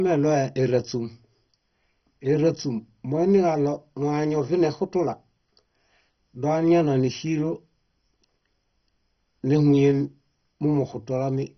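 From start to finish the speech is dull and gurgling, with a granular, watery roughness, the likely result of heavy MP2 compression. Layer II has starved its 32 sub-bands of bits, so everything above 6.1 kHz is switched off and the remaining bands are coarsely quantised, which fits a bitrate near 32 kbps. A spectrogram shows a hard ceiling at 6.1 kHz, with blocky energy flickering on and off just below it.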